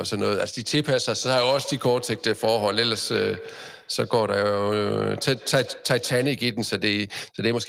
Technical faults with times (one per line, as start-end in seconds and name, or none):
1.10-6.47 feedback echo between two devices